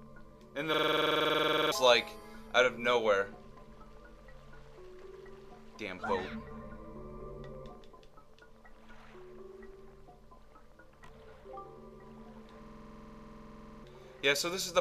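A system hang loop at 0.74–1.72 s and again at 12.63–13.84 s: the audio froze and a 46 ms piece, which fits a 2048-sample buffer, repeats exactly at 21.5 Hz. It sounds like a machine-gun stutter, not a dropout's silence.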